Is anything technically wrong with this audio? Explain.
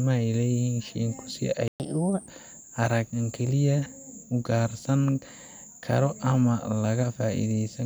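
Yes, the speech has two linked playback faults.

Playback stall, 1.68 to 1.80 s: just after "shiinku si" the sound cuts out for about 120 ms, a clear hole in the middle of the flow rather than a natural pause. This is likely the player running out of buffered data, or its playback thread being blocked, so nothing reached the output until it recovered. When the sound returns, it carries on from where it stopped.

Catch-up at higher speed, 1.80 to 2.28 s: straight after the gap, the player works off the backlog by resampling at 1.25 times normal speed. Because resampling changes speed and pitch together, that half-second sounds hurried and raised by roughly four semitones, giving a brief chipmunk-like lift. It drops back to normal speed and pitch just before "arag wax", once the lost time has been made up.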